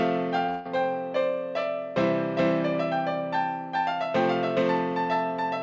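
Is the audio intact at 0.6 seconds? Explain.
No. From 0.50 to 0.73 s there's a long network dropout: the sound gives way to a fading buzzy continuation, likely because packets were lost, then resumes with a short piece missing. A doubled audio track also runs throughout, with a second copy about as loud trailing roughly four tenths of a second behind, likely from a second, slower capture path.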